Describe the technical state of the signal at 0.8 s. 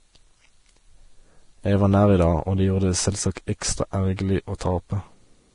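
At 0.8 s the speech carries the same damage heard from start to finish: hissy, grainy treble with roughened tones and softened consonant attacks, and nothing above 10.5 kHz. This is likely Vorbis compression at a low setting, consistent with about 32 kbps. The codec's coarse residue quantisation turns fine high-frequency detail into noise of similar energy. Unlike a plain low-pass filter, which sounds merely dull, this adds grainy hiss below the cut-off.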